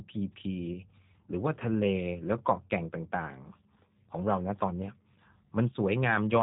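G.729 codec damage runs through the whole clip, from start to finish. The speech has been rebuilt from a vocal tract filter, a pitch predictor and a few pulses per short frame rather than carried as a waveform. It comes out plainly rough and synthetic, with a buzzy, slightly artificial texture. Nothing above about 3.8 kHz survives, so sibilants and consonant detail sound dulled. This all fits an 8 kbit/s speech codec.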